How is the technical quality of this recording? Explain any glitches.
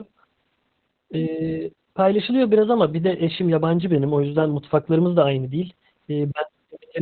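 Poor: the speech is heavily degraded throughout. Opus voice compression makes it muffled, hoarse and faintly robotic, with nothing above 4.4 kHz. The narrowband SILK coder coarsely approximates the excitation, which fits a bitrate around 8 kbps.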